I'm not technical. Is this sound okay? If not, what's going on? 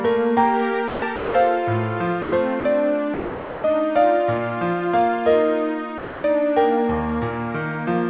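No. Six short stretches drop out and are replaced by a soft steady hiss: 0.88 to 1.02 s, 1.16 to 1.34 s, 2.22 to 2.32 s, 2.60 to 2.64 s, 3.14 to 3.64 s and 5.98 to 6.24 s. This is likely sound dropped by the voice detector, which treated real sound as background, stopped sending, and had filler noise played instead. The audio is phone-call quality, with nothing above 4 kHz.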